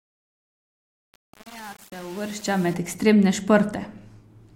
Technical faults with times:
0.00-2.74 truncation distortion on a fade

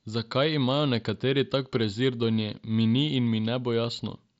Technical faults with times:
none

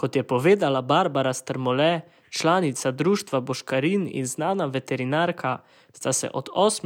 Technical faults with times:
none

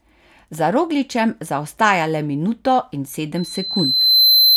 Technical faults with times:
3.36-4.57 loudspeaker feedback squeal

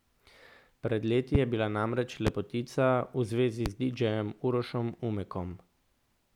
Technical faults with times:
1.35-1.38 loud pop
2.27-2.30 loud pop
3.66-3.69 loud pop

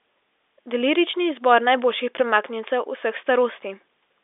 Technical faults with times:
none

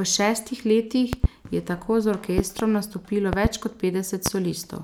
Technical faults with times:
1.13-1.27 loud pop
2.38-2.63 loud pop
3.33-3.48 loud pop
4.26-4.29 loud pop

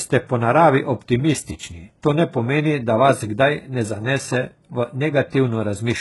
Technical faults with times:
0.00-6.00 HE-AAC compression

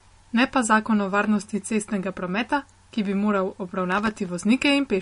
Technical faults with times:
0.00-5.02 MP3 compression
3.92-4.29 processor overload crackle

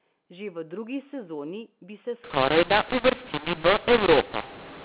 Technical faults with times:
2.24-4.84 mu-law and A-law mixed up

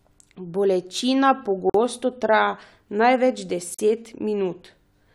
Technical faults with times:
1.70-1.74 gap at a join of encoded pieces
3.74-3.79 gap at a join of encoded pieces

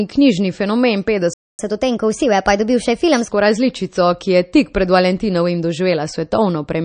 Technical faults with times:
0.00-6.85 MP3 compression
1.33-1.59 playback stall
1.59-3.29 catch-up at higher speed

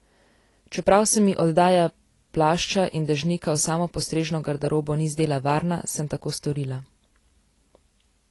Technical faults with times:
0.00-8.31 AAC compression

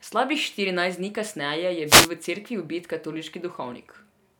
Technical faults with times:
1.86-2.10 wireless microphone noise hit

